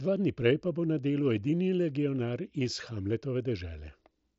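No technical faults detected.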